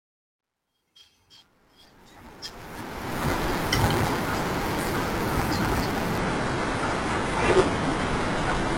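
From the start, the program filling the playback ring buffer and the hardware reading it have drifted out of step, causing buffer tearing. A small slice of each buffer, well under a tenth, repeats audio from roughly 20 ms earlier, with hard joins on both sides. The result is a steady robotic buzz at 172 Hz, which fits a 256-sample buffer, heard whenever the speech is present, including through the smooth fade-in up to 3.3 s.

At 6.18 s the adaptive stream switches to a lower-bitrate version and stays there until the end. There is no gap, only an abrupt drop in quality. Nothing above 11.3 kHz remains, and the speech loses its upper treble with heavier codec artefacts, consistent with a fall from mid-rate AAC to a very low-rate HE-AAC stream.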